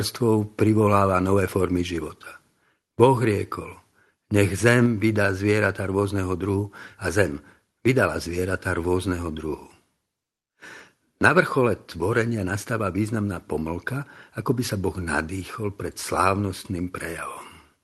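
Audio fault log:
4.86 s microphone volume stepped down: speech and background drop together by about 2 dB in one instant and stay lower, likely the call software cutting the input gain. Unlike a fade or compressor pumping, there is no gradual slope and no recovery afterwards.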